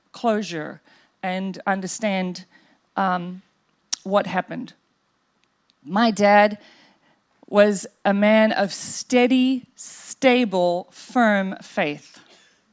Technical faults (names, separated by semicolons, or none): none